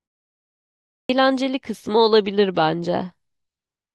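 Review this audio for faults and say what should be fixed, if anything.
A clipped start after a pause occurs at 0.94 s. After 0.94 s of silence, the waking output device swallows the first 154 ms of speech, up to 1.09 s. The waveform jumps from flat to full level, and the spectrogram shows energy beginning abruptly. Keeping the output stream active through silence prevents this.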